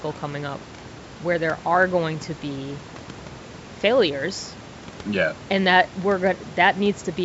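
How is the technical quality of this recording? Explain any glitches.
No glitches are audible anywhere in this speech recording.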